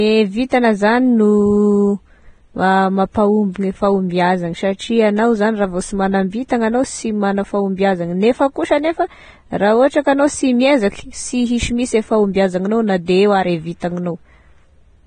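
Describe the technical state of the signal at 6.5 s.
At 6.48 s, a pre-echo sits just before "agnao sy magna". A brief hiss of about 17 ms precedes the onset. Block-spread quantisation noise smears the attack. The speech is also hissy and grainy, with nothing above 9.7 kHz. This likely comes from heavy Vorbis compression, at a rate that points to roughly 22 kbps.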